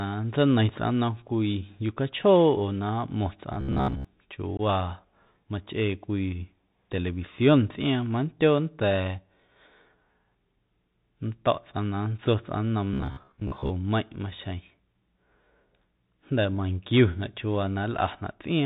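Throughout the clip the speech passes through the Bluetooth CVSD headset codec. At 64 kbit/s it encodes each sample as a single up-or-down bit with an adapting step size, and it cuts off everything above about 4 kHz. The damage is plainly audible. The sound is narrow and boxy, s sounds come out scratchy, loud bright moments smear where the step size cannot keep up, and a granular hiss sits under the speech.

From 3.54 to 4.05 s the audio turns robotic. The likely cause is fresh audio arriving too slowly, so the playback side loops a short buffer instead of waiting. Roughly most of the real audio in that stretch is replaced by repeats. The loop imposes a fixed 66.7 Hz buzz, which points to a 15 ms buffer, and the speech becomes a stiff metallic drone that only loosely tracks its shape.

At 4.57 to 4.60 s there is unconcealed Bluetooth headset packet loss. About 18.8 ms of audio, which points to a handful of lost radio packets, drops out and nothing fills the gap. 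The result is a hard-edged hole, and the speech returns briefly subdued as the CVSD decoder recovers.

From 12.93 to 13.71 s the same robotic sound returns, likely again from buffer repetition, with roughly half of the audio repeated. It has the same 66.7 Hz metallic buzz over the speech.

At 14.77 s a 3.8 ms dropout, which fits a single lost packet, leaves a brief hole with abrupt edges in the sound.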